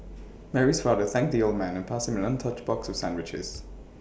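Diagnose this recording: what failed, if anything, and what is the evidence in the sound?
Nothing in the recording points to a failure at any stage of the chain; the speech signal stays continuous and intact throughout.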